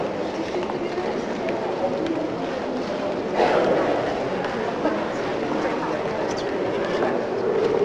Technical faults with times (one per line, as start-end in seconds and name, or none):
none